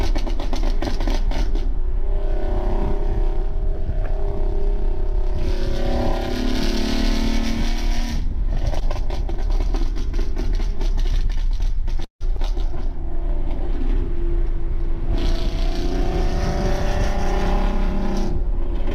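A short stall from a late packet falls at 8.79 to 8.83 s. A packet missed its playout time and the jitter buffer ran dry, so the receiver held the last sound for about 20 ms before resuming at the same point. Nothing is lost, but one sound lingers slightly too long with a faint buzz or dip.

A call audio freeze follows at 12.04 to 12.22 s. It was likely caused by packets held up in transit emptying the buffer. The last sound is stretched into a fading buzz or hiss that drops to about 120 ms of silence, inserting roughly 163 ms of gap before the audio picks up where it stopped.

A skip ahead comes right after, at 12.36 to 12.39 s. Around 70 ms of audio was discarded while later packets were already queued, and playback jumps forward with only a brief 8 ms fill. The two sides of the cut are spliced almost directly, with a small piece of sound missing.

A jitter buffer slow-down runs from 12.74 to 13.67 s. 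The buffer was low, so the receiver repeated single pitch periods and bits of pauses over and over, adding 53 ms. The audio plays at 95% speed with unchanged pitch, sounding slightly drawn out.

A jitter buffer speed-up runs from 16.81 to 18.94 s. The buffer held more than its target, so the receiver trimmed short pitch-period pieces repeatedly, removing around 70 ms in total. The audio plays at 103% speed, same pitch.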